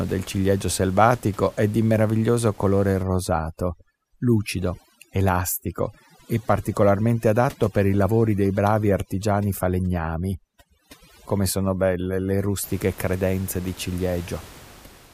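From 3.03 s to 12.63 s, overdone noise removal takes hold: a noise reduction stage set far too aggressively treats any frequency band sitting close to its noise estimate as noise and pulls it down hard or shuts it off. The room noise, about 24 dB below the speech, drops and breaks up into twinkling specks, while the quieter parts of the voice are stripped along with it.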